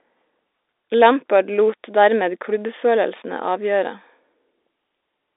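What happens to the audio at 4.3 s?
Sample clock jitter, running from 1.08 s to the end: the converter's clock wanders by around 10 µs, so speech carries a hiss roughly 25 dB down that swells on loud, bright sounds.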